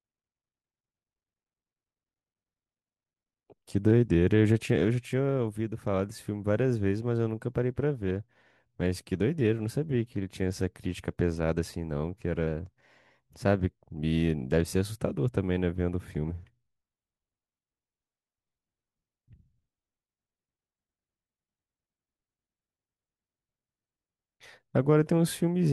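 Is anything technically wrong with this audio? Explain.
Yes. From 12.47 to 13.60 s the speech abruptly runs about 5.8% faster and rises by roughly 98 cents, close to a semitone, so it sounds briefly sped up and detuned before snapping back to normal pace and pitch. This is likely a drift correction step, where software reconciling two device clocks changed the playback rate in one jump to refill or drain its buffer, shifting speed and pitch together until it corrected.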